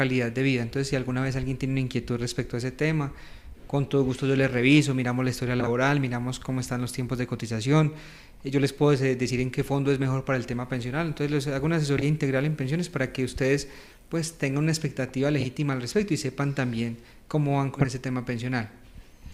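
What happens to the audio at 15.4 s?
Frames out of order, 15.40 to 15.47 s: two neighbouring runs were decoded swapped, giving a garbled flutter.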